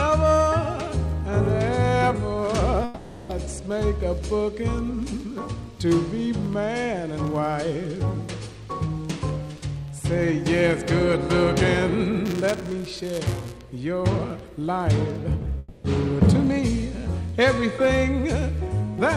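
Long network dropouts occur at 2.84 to 3.30 s and again at 15.58 to 15.85 s. The likely cause is audio failing to arrive over the network. Both gaps, 450 ms and 260 ms, are filled completely by concealment: the last sound is stretched into a fading buzz or hiss rather than silence, and when the audio resumes, the material from those stretches is gone. Buffer tearing runs from 12.25 to 13.57 s as a rattling, robotic buzz at 188 Hz, present only while sound is playing. The writing and reading positions in the playback ring buffer have drifted until they cross inside each period, which fits a 256-sample buffer. A small sliver of every period carries audio roughly 10 ms old, with hard splices on both sides.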